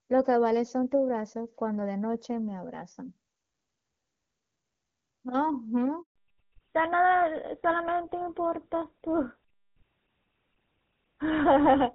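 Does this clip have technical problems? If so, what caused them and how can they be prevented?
Yes. At 6.02 s the call underwent a handover from one network to another, and no speech frames arrived while the link switched. The sound fades within a few tens of milliseconds and stays silent for about 140 ms, until 6.16 s, and whatever was said in that span is lost. Better radio planning and make-before-break handover procedures would keep frames flowing during the switch.

From 6.16 s to the end, the call shows a fallback to narrowband. It drops from the clear wideband sound heard earlier, which fits HD Voice (AMR-WB) at a high rate, to a codec that points to GSM full rate, and nothing above 4 kHz survives, so the speech turns duller and rougher. Making sure the target network and both handsets support HD Voice would keep the wideband codec in use after the handover.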